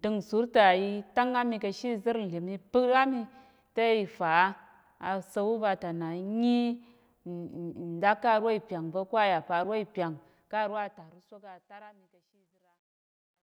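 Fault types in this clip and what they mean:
Truncation distortion on a fade: the speech fade-out loses resolution without dither, as if cut to 12 bits, turning gritty from 11.8 s.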